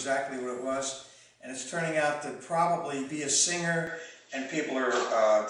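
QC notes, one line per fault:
3.87–5.50 s: input switched to a poorer device, likely a lower-grade microphone. Sound dulls abruptly, nothing above 7.7 kHz. Level shifts by about 5 dB. Faint new noise appears.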